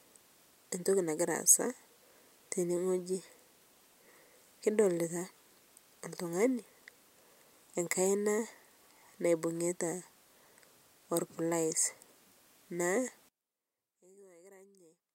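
One channel inverted, from 13.29 s to the end of this speech recording at 15.14 s: over that final stretch the sound collapses by about 29 dB. That is what happens when a stereo pair with one side flipped in polarity is heard summed to mono. The centred speech and background, common to both channels, cancel, leaving only the faint difference between them. Reversed polarity on one channel is the likely cause.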